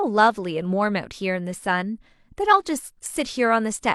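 No technical faults are audible.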